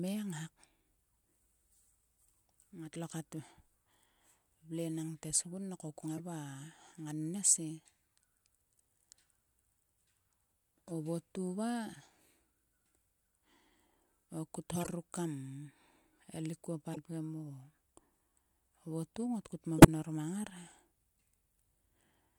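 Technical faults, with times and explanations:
6.06–6.20 s, 14.73–14.87 s (between "o kut" and "ruk kam"), 16.93–16.97 s, 19.78–19.88 s, corrupt frame decoded: brief chirps and noise bursts, the last loudest at about -10 dBFS, the others about -25 to -30 dBFS. Damaged compressed frames were decoded anyway, so misread gains and codes scattered energy to wrong frequencies across a few frames each time.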